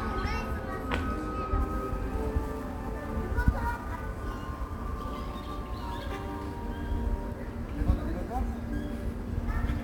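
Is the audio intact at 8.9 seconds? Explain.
No. From 1.60 s to the end of the clip, a grainy hiss rides on the sound, strongest on loud, bright passages. This is sample clock jitter: the converter's unstable clock mistimes each sample by roughly 10 microseconds, producing error about 30 dB below the signal.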